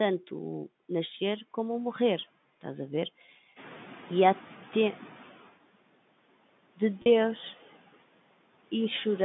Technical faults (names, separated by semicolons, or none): noise suppressor artifacts; packet loss with pitch repetition; noise suppressor catching up